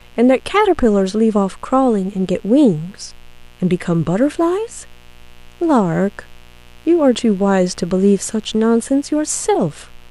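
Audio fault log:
Throughout, mains buzz: a steady, raspy buzz sits under the speech, roughly 30 dB below it. It's built on 60 Hz, with sharp switching spikes twice each cycle spraying harmonics up into the kilohertz range, so it rasps rather than hums.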